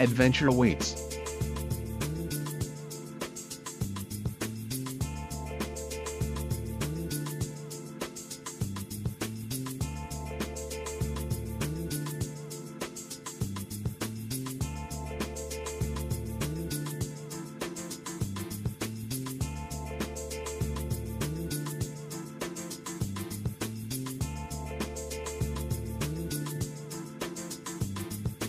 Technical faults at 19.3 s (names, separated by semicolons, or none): none